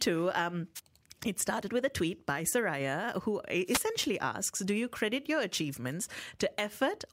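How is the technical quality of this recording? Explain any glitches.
Two short bursts of static break into the speech, heard at 0.75 to 0.80 s, just before "it started with a", and again at 3.65 to 3.86 s. Each is a wireless microphone noise hit: the FM radio signal faded as reflections cancelled, letting receiver hiss swish over the voice.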